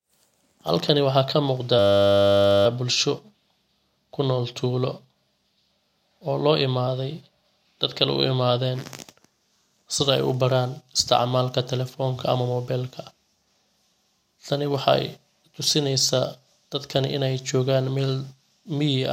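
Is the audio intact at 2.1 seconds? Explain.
No. At 2.1 seconds the speech falls inside a system hang loop lasting from 1.79 to 2.66 s. The system froze while the audio hardware kept replaying one 10 ms piece of its buffer. That exact repetition sounds like a steady 100 Hz buzz.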